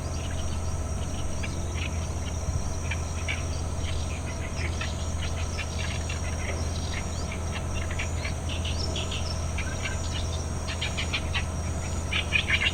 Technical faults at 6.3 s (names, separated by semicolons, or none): none